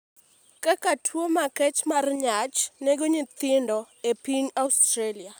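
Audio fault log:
Nothing stood out on listening to this speech clip.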